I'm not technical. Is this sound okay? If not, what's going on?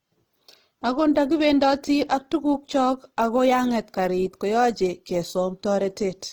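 No. The speech was likely squeezed hard by Opus compression throughout, which fills in lost detail with noise, so it sounds rough, grainy and hissy.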